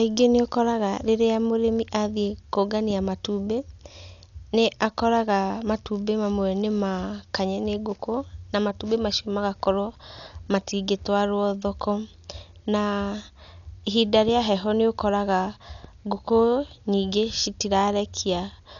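From start to finish the speech is dull and band-limited, with nothing above 6.9 kHz, and there's a rough, fluttery noise hanging around the voiced tones. That's most likely Dolby Digital compression: the encoder narrows the bandwidth and leaves many frequency lines without mantissa bits, so the decoder fills them with dither noise. The damage is heavy, which fits a starved bitrate of around 48 kbps.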